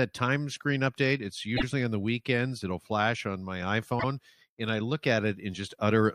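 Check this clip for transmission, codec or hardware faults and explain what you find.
Two short stutters from repeated frames occur in this speech clip, at 1.56 s and 3.99 s. At 1.56 s a block of 52.2 ms plays twice, which fits two compressed frames of about 26 ms. At 3.99 s a single 26.1 ms block repeats. The decoder replays the same data, so each stutter repeats the same stretch of sound. This sets it apart from dropouts, which leave gaps. Each repeat lengthens the audio by its own duration.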